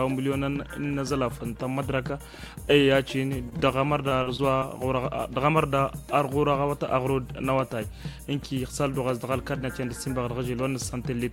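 At 3.49, 3.57 and 3.60 s, short concealed packet loss: about 20 ms each went missing and was patched by extending the preceding sound, heard as brief smears. A spectrogram shows smoothed, repeated harmonics.

From 4.09 to 4.64 s, repeated packet loss (robotic sound): four gaps, the longest 37 ms, were filled in succession, giving choppy audio with pieces missing. The waveform shows looped, periodic segments.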